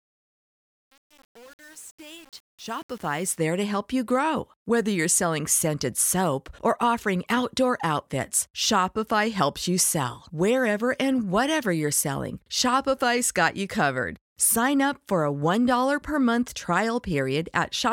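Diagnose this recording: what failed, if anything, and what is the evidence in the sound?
The fade-in at the head of the speech failed through truncation distortion on a fade, a sample-format or gain-stage fault. From 0.0 to 3.37 s, just before "there to help you", the quiet rising level sounds gritty. The fade stage kept only about 7 bits without dither, so low-level samples collapse onto a few coarse steps and the waveform turns into crude square blocks until the level climbs clear.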